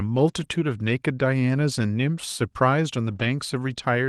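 Lost packets rebuilt from error correction affect this speech clip at 0.39–0.45 s and 3.11–3.25 s. Each missing stretch was replaced by the low-bitrate copy that the following packet carried, so there is no gap, but those moments sound briefly rougher and noisier against the Opus call audio, whose band stops near 12 kHz.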